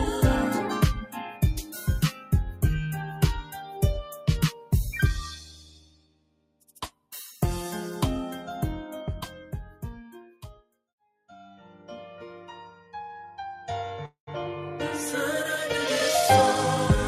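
A speech-tuned noise suppressor has been left running on non-speech material. It treats steady tones, ambience and decaying tails as noise and keeps pulling them down, so the level swings by roughly 10 dB across the whole clip. Onsets punch through while sustained parts sink, giving a pumping, breathing quality and thinned-out decays. In four stretches the suppressor cuts this sound much harder than elsewhere. From 0.98 to 2.63 s the dip reaches about 15 dB, and from 3.04 to 4.73 s about 14 dB, each dulling roughly a second of material. From 5.33 to 7.1 s it goes as deep as about 18 dB over around one and a half seconds, and from 10.23 to 10.79 s it reaches about 18 dB again in a brief dip. In these stretches held and fading content drops away and tails are clipped short, while sharper attacks largely survive. At 14.05 to 14.29 s there is a call audio freeze, likely caused by packets stalling in transit and the jitter buffer running dry. 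The receiver stretches the last sound into a fading buzz or hiss for 217 ms, about 110 ms of which sits as near-silence. The audio then resumes exactly where it stopped, so nothing is lost. Instead a gap is inserted and everything afterwards arrives 217 ms late.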